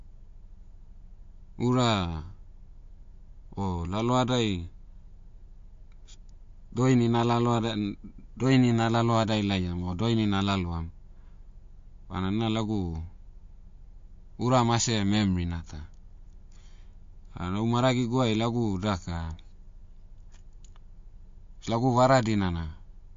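MP3 compression, likely the cause, runs throughout the speech. Nothing sounds above 7.2 kHz, where the encoder has cut the treble, and weak frequency lines flicker on and off between frames. The result is a plainly audible watery swirl, metallic s sounds and smeared attacks, consistent with a low bitrate near 48 kbps.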